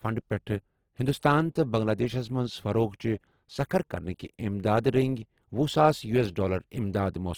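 From start to finish the speech carries plainly audible Opus compression, likely from a low rate around 16 kbps in music mode. The band energies survive, but the detail doesn't, so the sound comes across rough and grainy even though content still reaches about 20.2 kHz.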